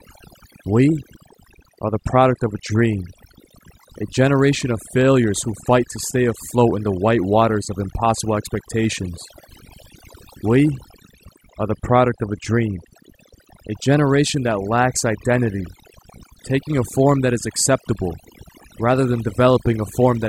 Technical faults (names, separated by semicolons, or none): overdone noise removal